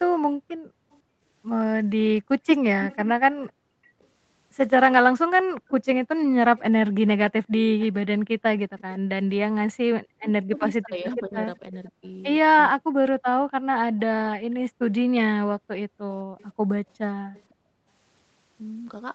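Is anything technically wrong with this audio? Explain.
Yes, there are three kinds of fault.

From 0.48 to 17.54 s there is an echo leak: the far side's echo canceller likely failed to remove its loudspeaker sound. A faint copy returns about 504 ms late, roughly 25 dB below the speech.

From 0.56 to 8.43 s and again from 13.46 to 17.88 s, the background is gated by the echo canceller. It clamped the microphone while the loudspeaker played, so the room sound dips by about 40 dB. The dips total roughly two seconds in the first stretch and one and a half in the second.

From 9.91 to 13.18 s there is speech suppressed in double talk. With both sides talking, the canceller likely mistook the talker for echo and turned it down. The voice drops by roughly 40 dB for about one and a half seconds in total.

None of the audio extends above 8 kHz, which matches the 8 kHz bandwidth of the Opus call path at 32 kbps.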